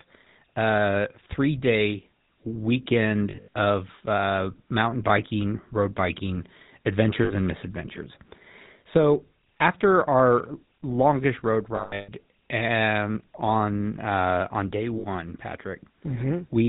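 The audio passes through the GSM full-rate codec at 13 kbps throughout. It models the vocal tract and drives it with a regular pulse train built from every third excitation sample, so nothing above 4 kHz survives, and the speech carries a plainly audible buzzy, gravelly roughness.

Lost GSM frames are concealed by repeating the last good frame at falling level, so each gap rings roughly and metallically. This happens at 3.3 to 3.48 s, at 7.24 to 7.32 s before "and misadventures", at 11.76 to 12.1 s after "longest road" (the longest at 300 ms), and at 14.98 to 15.05 s after "on uh on day".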